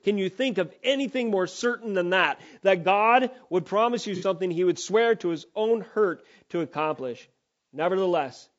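Across the whole recording the speech sounds rough and grainy, with a hiss sitting between the harmonics and a thin, synthetic top end, damage that is plainly audible throughout. This is likely low-delay AAC compression of the AAC-ELD kind used for video calls. At this quality the result fits a bitrate of around 32 kb/s, too few bits to fill in the spectrum between harmonics.

From 4.16 to 4.24 s, right after "would promise you" and just before "he would swear to", the audio briefly smears into a noisy, phasey patch rather than a clean cut. This is AAC frame loss with concealment. The decoder lost data, which fits two missing frames, and filled the gap by reusing and scrambling the last good spectrum, so the gap is too short to fade into silence.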